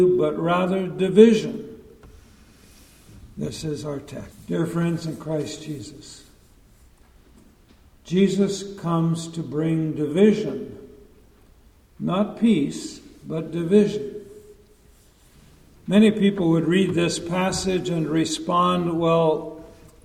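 No technical fault can be heard anywhere in this audio. Its level, timing and continuity hold steady throughout, with nothing that points to a problem in how it was captured or processed.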